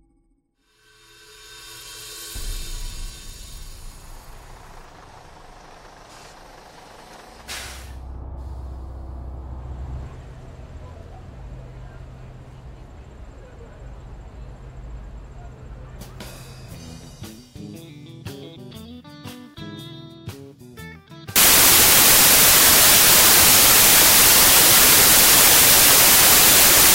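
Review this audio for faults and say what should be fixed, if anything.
From 21.36 s to the end at 26.95 s, the sound collapses into loud, harsh broadband noise. These are samples built from the wrong bytes: the reader assembles each sample from misaligned or swapped bytes, so the rapidly changing low-order bits land in the most significant positions and dominate every value. To prevent it, verify the byte order and frame alignment whenever reading resumes or a new segment begins.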